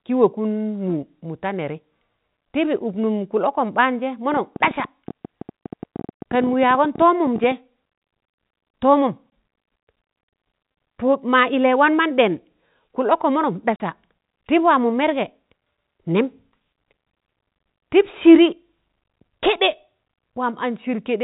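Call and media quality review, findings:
Packet loss filled with silence, 9.30–9.32 s: jitter buffer or network dropped what sounds like one 20 ms packet; receiver inserted silence instead of concealment. Hard-edged gap in the speech.

Packet loss filled with silence, 13.76–13.80 s: 40 ms hole, consistent with two consecutive 20 ms packets lost. Same silence-fill behaviour, longer dropout. The narrowband G.711 tone around both gaps is audible and intact.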